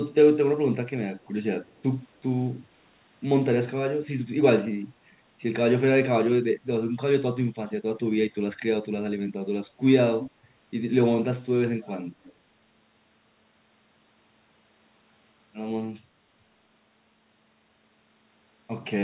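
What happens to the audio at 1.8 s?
At 1.8 s there is an echo leak, from 1.64 to 1.83 s: the far end's loudspeaker audio was likely not fully removed by its echo canceller and was sent back. A very faint copy of the speech follows about 284 ms behind, far below the main signal.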